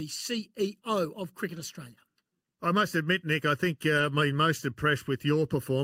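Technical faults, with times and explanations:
Throughout: channel delay (comb filtering). One channel trails the other by about 0.7 ms, and when the two are summed to mono, everything they share cancels at a fixed, evenly spaced series of frequencies, the first around 700 Hz. Those stationary notches carve the same gaps out of every sound in the clip, giving the speech a hollow, phasey colour that never moves or varies with what is being said.
1.55–1.61 s and 3.97–4.03 s (the second between "I think" and "I'm most"): lost packet rebuilt from error correction. In each spot a short run of audio, about 40 ms, which fits two lost packets, was never received. The packets that followed carried low-bitrate backup copies, and the decoder played those instead, so the speech continues with no silence or click. The substitutes carry less detail, so each brief patch sounds rougher and noisier than the speech around it.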